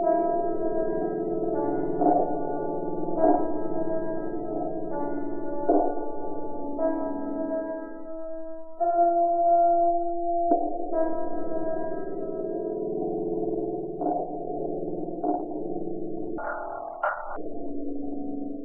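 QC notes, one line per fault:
16.38–17.36 s: audio read two samples at a time (double speed). For just under a second, the sound races at twice its normal speed and sits a full octave higher, 12 semitones up. The reader treated each pair of samples as one frame, as if the data held two channels or samples twice as wide. So it got through the material twice as fast, which shortens events and raises every pitch by the same octave.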